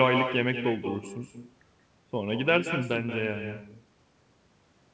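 Throughout the speech, echo with no canceller shadows every phrase. The far-end loudspeaker leaks into its microphone, returning a thinner copy about 7 dB quieter and roughly a fifth of a second late. On a spectrogram each syllable has a fainter twin shifted right, all below 8 kHz, which fits a wideband call codec such as G.722.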